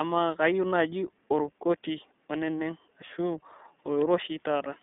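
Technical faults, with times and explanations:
Throughout, iLBC codec: the speech has passed through a narrowband VoIP codec that codes each short frame's excitation on its own, with a plainly audible roughness that fits iLBC's 20 ms mode at about 15.2 kbps. The band is held to roughly 200 Hz to 3.6 kHz with nothing above 3.8 kHz, so sibilants and breath lose their brightness, and the frame-by-frame coding leaves the voice slightly buzzy and synthetic rather than smooth.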